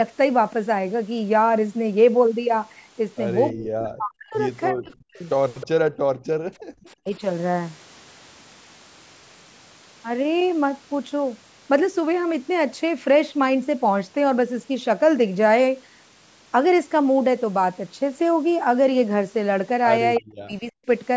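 Speech, band-limited with nothing above 8 kHz, showing speech suppressed in double talk at 3.52–4.34, 4.70–5.26, 6.64–7.21 and 20.18–20.88 s. The voice itself dips by about 40 dB, likely because the echo canceller ducked it while the far side talked. The loss follows the other talker rather than the whole signal dropping out. Brief echo leak at 5.61–5.67 and 20.15–20.19 s leaves a scrap of voice trailing 316 ms behind, about 10 to 15 dB down. That fixed, discrete delay sets it apart from room reverberation and likely comes from loudspeaker sound the canceller missed. Background gated by the echo canceller at 5.91–6.36 s pulls the room tone down by about 40 dB, then releases it. Unlike double-talk suppression, it hits the room sound rather than the voice.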